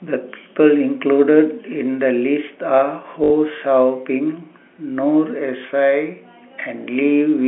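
From 3.24 to 3.3 s, packet loss with last packet repeated fills a 60 ms gap with a replayed packet. Unlike a silent dropout, it gives a robotic stutter buzzing near 50 Hz, which fits 20 ms packets.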